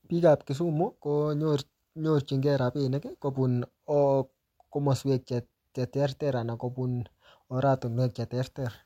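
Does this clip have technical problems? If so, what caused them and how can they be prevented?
No, nothing here sounds like a technical problem, so there's no cause to track down and nothing that needs preventing.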